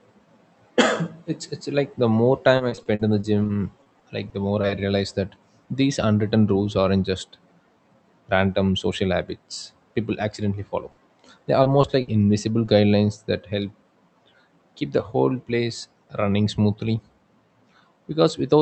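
Speech carried over a call link, likely Opus with its band topping out around 8 kHz, with three kinds of loss. From 2.57 to 4.71 s there is repeated packet loss (robotic sound): fourteen short gaps, none over 40 ms, each patched by continuing the last sound. Because the holes come so close together, the stretch turns choppy rather than showing isolated blips. A burst of packet loss follows "accidentally follow" at 10.91–10.99 s, and another hits at 12.01–12.09 s. Each drops about 60 ms as a fading held buzz or hiss, and the audio resumes further on with the middle missing. Short concealed packet loss appears at 11.63, 11.81 and 12.65 s (the last just before "that help"). Each fills only about 20 ms, so it is heard as a brief smear or wobble rather than an audible dropout.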